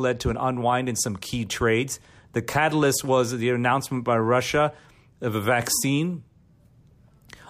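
No technical faults are audible.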